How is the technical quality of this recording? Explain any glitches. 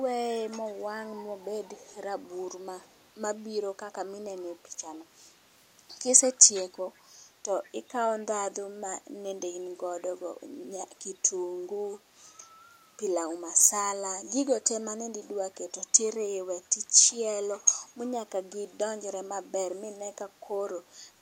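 The speech has brief echo leak: delayed repeats about 144 ms behind the speech at 0.68–0.72, 2.86–3.07, 6.46–6.63, 7.64–7.70 and 17.08–17.14 s. The loudest is at 6.46 s, the quietest at 2.86 s. They are likely loudspeaker sound that the far side's echo canceller failed to remove.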